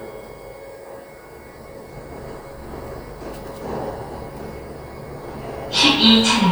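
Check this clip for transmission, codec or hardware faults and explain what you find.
No transmission, codec or hardware faults turn up anywhere in these sounds. Nothing in the audio points to a problem along its path.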